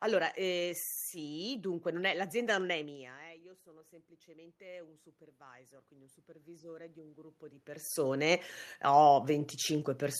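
Speech recording with automatic gain rising from 2.75 to 9.56 s. The input falls by about 19 dB as the talker moves away around 3 s, and the control slowly lifts its gain by about 13 dB, so voice and room noise swell together.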